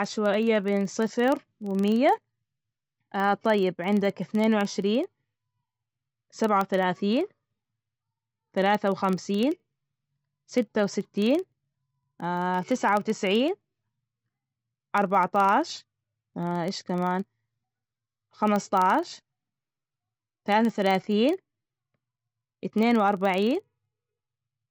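From the first moment to the end, the speech has that watery, swirly quality where quiet detail flickers in and out, with s sounds going metallic and chirpy. That's most likely MP3 compression run short of bits. The encoder chops the treble at a fixed point and drops weaker frequency bands frame by frame, which is what makes it shimmer. The amount of damage points to a low bitrate, something around 48 kbps.

Running under all of that, also for the whole clip, is a steady buzz at about 23.4 Hz, a rapid ticking that gets louder and softer along with the speech. That's a filter restarted on every block. It forgets its state at each block boundary and starts again from silence, so every block opens with a little click. At that repeat rate, it fits a 2048-sample block.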